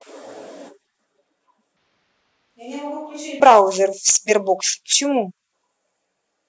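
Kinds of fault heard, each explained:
Switch to a distant microphone (1.77 to 3.40 s): speech abruptly turns roomy, thinner and about 10 dB quieter, likely because a farther microphone replaced the close one.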